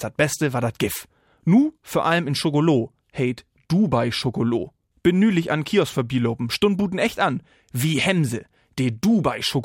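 Nothing is technically wrong with this audio; there are no faults to time or trace to a cause.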